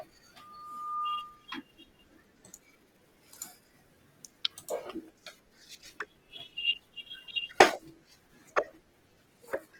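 From 0.39 to 1.53 s, loudspeaker feedback squeal: a 1.2 kHz tone swells over roughly 0.7 s to about the speech level, drawing a bright horizontal line on the spectrogram. From 4.83 s to the end, the adaptive stream drops to a lower bitrate, which fits a fall from 64 to 16 kbit/s. The sound abruptly turns smeared, with no gap.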